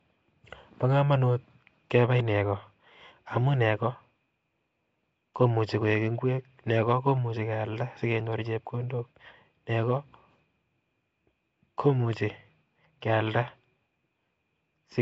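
A speech recording with Nellymoser compression damage that is plainly audible from start to finish. The voice carries a rough, hissy halo and a smeared, underwater quality, and nothing is present above about 7.7 kHz. That pattern is likely the Flash-era Nellymoser Asao codec, which spends a fixed, small bit budget on short blocks, leaves weak bands empty and fills them with noise, consistent with a rate near 32 kbps.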